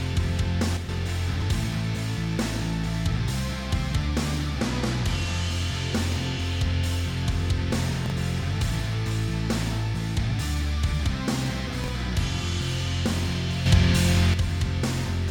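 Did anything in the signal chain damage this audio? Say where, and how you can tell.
Yes. There are two kinds of damage, both in the digital part of the chain.

A sudden gain jump occurs twice. From 0.77 to 0.89 s the level drops by about 6 dB, and from 13.66 to 14.34 s it rises by about 7 dB. The background noise steps together with the sound, so this is a gain change applied to the whole signal, not a change at the source. The likely cause is a digital gain setting or bit shift applied without a ramp. On the waveform, the envelope steps at a single sample. On a spectrogram, every band brightens or darkens at once, with a thin broadband line at each edge.

Chunks out of order appear at 1.34 to 1.42 s, 8.06 to 8.12 s and 11.84 to 11.88 s, each a brief jumbled moment. The pattern fits 20 ms blocks played three, two and one block late, pointing to a buffer or network packet-ordering stage. 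No audio is lost, but each event leaves three hard joins. These show on the waveform as sharp discontinuities and on the spectrogram as vertical broadband lines around a short scrambled segment.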